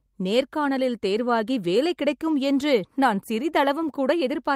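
No technical faults are audible anywhere in the speech recording.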